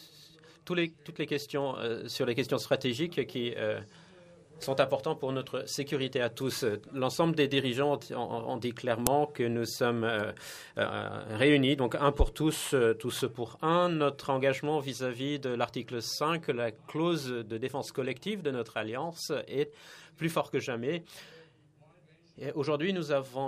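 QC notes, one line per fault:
9.07 s, uninitialised buffer: a single sharp, loud crack, over in about 1.5 ms, sounding like a hard click. A playback block went out before any audio had been written into it, so whatever stale data sat in that memory was read as sample values. Those arbitrary values jump far beyond the surrounding level, hence the violent spike. Its length fits a 64-sample block.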